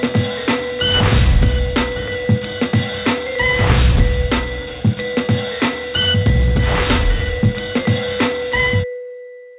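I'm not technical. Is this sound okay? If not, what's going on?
Yes, this sound is okay, and nothing is going wrong in it.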